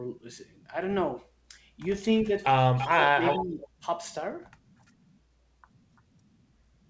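From 2.37 to 2.45 s a faint delayed copy of the speech appears, about 30 dB below the talker. This is an echo leak, likely from a far end playing the call on a loudspeaker whose echo canceller let some of the pickup through and sent it back. The copy trails the original by 335 ms. It returns louder, about 10 dB down, from 2.78 to 2.88 s, and again from 3.25 to 3.47 s at the same 336 ms lag.

Overlapping these echoes, the speech is suppressed in double talk. From 2.87 to 3.22 s the talker's level sinks by roughly 15 dB. From 3.39 to 3.86 s it falls further, by roughly 25 dB. The echo canceller likely could not tell the local talker from the returning echo, so it turned both down. Across the whole clip the audio stops at 8 kHz, which fits a wideband codec such as G.722 on the call path.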